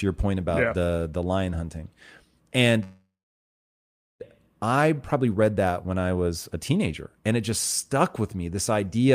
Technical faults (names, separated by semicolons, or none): call audio freeze